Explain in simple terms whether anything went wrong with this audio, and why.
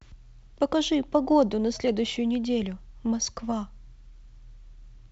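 Nothing went wrong; this is ordinary wideband phone audio.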